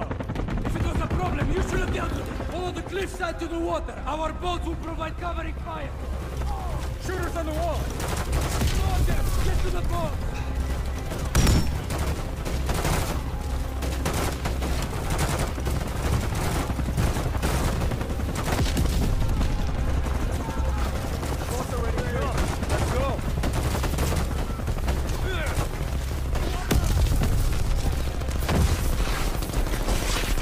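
At 16.46 s the audio has a repeated buffer: a 10 ms slice plays once more with a hard join, so it sounds like a single click, not a stutter. Unlike a dropout, there's no silence, just the repeated slice, and roughly 10 ms of audio is lost.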